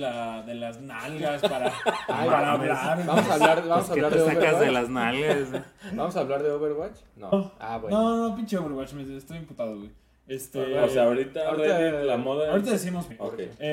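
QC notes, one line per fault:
7.32 s and 13.10 s, compressed frames skipped: the sound jumps ahead about 200 ms, fitting roughly ten dropped 23.2 ms frames.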